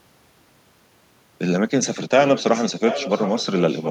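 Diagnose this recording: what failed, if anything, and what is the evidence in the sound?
The failure is in call processing, an echo leak. From 2.27 s to the end of the recording there's a second, fainter copy of the speech trailing the original by about 0.72 s, sitting roughly 10 dB under it. That's most likely the far end playing the call over a loudspeaker, with its echo canceller failing to scrub what the microphone picked up, so the leftover got sent straight back down the line.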